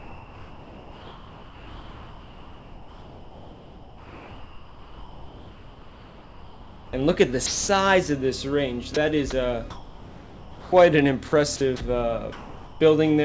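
From 0.0 to 6.93 s, comfort noise in place of the background, likely from discontinuous transmission: detailed ambience becomes a steady, featureless hiss about 4 dB quieter, a smooth uniform band on a spectrogram that, like everything here, stops at 8 kHz.

At 7.46 to 7.68 s, 8.94 to 8.96 s and 9.30 to 9.32 s, sound is dropped by the voice detector, likely misreading quiet sound as background. The waveform shows flat, noise-filled gaps.

Comfort noise returns from 9.70 to 10.72 s, about 4 dB down, and again from 12.32 to 12.80 s, about 3 dB down. Both show the same texture-less band, likely from the same cause.

From 11.28 to 11.80 s, sound is chopped by the voice detector, likely because it switched repeatedly, swapping about 120 ms for synthetic fill. The spectrogram shows detail alternating with blank noise patches.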